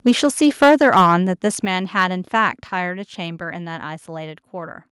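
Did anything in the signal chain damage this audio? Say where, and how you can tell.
Yes. From 0.06 to 1.14 s the speech has a harsh, crackling edge with flattened peaks about 6 dB past full scale, roughly one sample in twenty. That is microphone overload at the converter. The input volume was likely set too high. A brief repeat at 2.01 to 2.03 s overshoots by about 1 dB.

The microphone volume was stepped down twice, audible as sudden level drops in voice and background together: about 2 dB at 0.64 s and about 6 dB at 1.65 s. This is likely call processing reacting to the overload by lowering the device's input gain in single steps.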